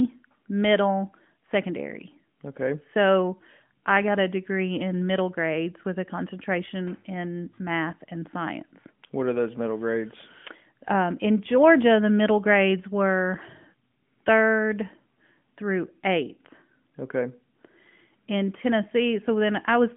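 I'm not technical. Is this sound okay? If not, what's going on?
Yes, I hear nothing wrong with this recording.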